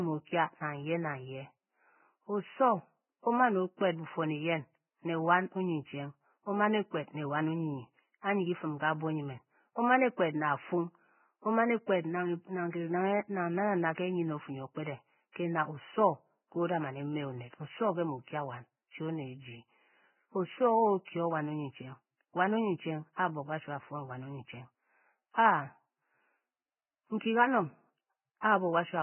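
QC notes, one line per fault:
Throughout, Vorbis compression. The speech is dull, with nothing above 3 kHz, and the remaining treble sounds hissy and grainy. Consonants blur and tones roughen. This is likely heavy Vorbis coding at a very low bitrate, around 9 kbps, replacing fine detail with noise.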